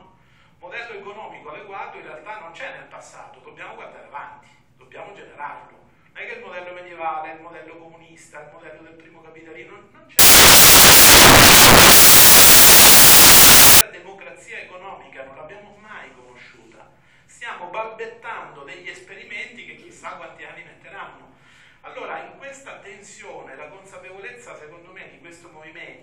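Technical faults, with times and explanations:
10.19 to 13.81 s, samples built from the wrong bytes: for about 3.6 s the audio gives way to loud, harsh broadband noise. The reader is assembling each sample from misaligned or misordered bytes, so the rapidly fluctuating low-order bits land in the most significant positions and dominate every value. Clean playback resumes at 13.81 s.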